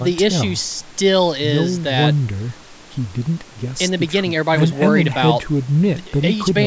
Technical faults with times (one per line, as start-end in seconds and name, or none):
none